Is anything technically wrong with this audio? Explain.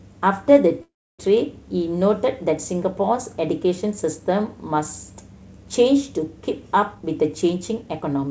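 Yes, there are two faults in this speech.

From 0.82 to 1.21 s there is a call audio freeze. The last sound is stretched into a short buzz that fades, then the audio goes silent for about 0.29 s before resuming where it left off, so nothing is lost but a gap of roughly 0.37 s is inserted. The likely cause is packets held up in transit: the jitter buffer ran dry, and the receiver filled the wait by extending the last sound, then silence, until the delayed audio arrived.

From 6.94 to 8.24 s there is a jitter buffer speed-up. The speech runs about 15% fast while its pitch stays the same, so it sounds hurried rather than higher. The buffer was holding more audio than its target, so the receiver repeatedly cut out tiny slices one or a few pitch periods long, trimming about a fifth of a second in all to bring the delay back down.

The band stops at 8 kHz, which points to a G.722 call codec.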